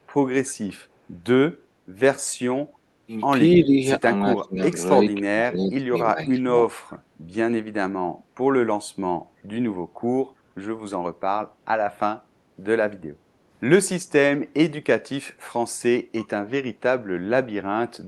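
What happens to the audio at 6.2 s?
At 6.2 s the speech dips sharply, by roughly 15 dB, from 6.11 to 6.68 s. This is speech suppressed in double talk. Both sides likely spoke at once, and the echo canceller, unable to separate them, turned this talker down too.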